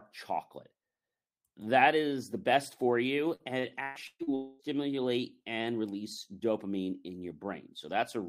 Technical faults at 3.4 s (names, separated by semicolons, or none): repeated packet loss (robotic sound)